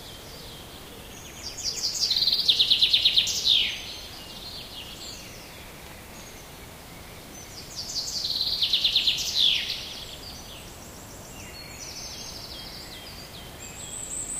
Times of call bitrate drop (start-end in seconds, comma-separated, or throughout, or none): 0.93-6.01